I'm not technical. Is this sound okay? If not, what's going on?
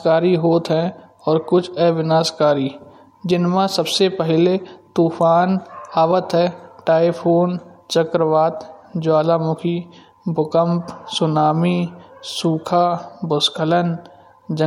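Yes, it's fine: nothing in this speech recording stands out as a technical problem, so there's nothing to worry about.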